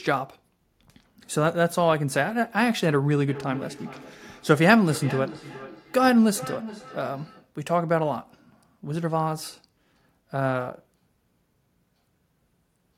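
It's a speech recording with a clear case of feedback echo between two devices from 3.28 to 7.54 s. Each word comes back at a steady interval of roughly 0.4 s, peaking at about 15 dB below the speech. That's what happens when two devices in the same room share a call: one plays out what the other's mic sent, that mic catches it again, and neither echo canceller removes sound played by the other device.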